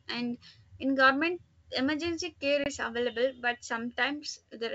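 At about 2.64 s the speech drops out for 20 ms, roughly one packet, as packet loss on an ADPCM call; the decoder's predictor loses sync, so the sound comes back slightly distorted before settling.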